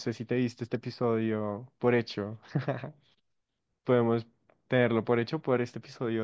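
Nothing in the speech stood out as a technical fault on listening.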